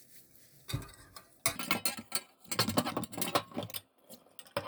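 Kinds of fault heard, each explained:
Section at the wrong speed: from 1.56 s to the end, the sound runs at twice its recorded speed, so everything becomes hurried and jumps up in pitch by around ten semitones, most of an octave, at a single moment. This likely comes from that stretch being played or edited against the wrong clock. Timing and pitch shift together, which sets it apart from a pure pitch shift, where tempo stays put, and from wow, where pitch drifts gradually.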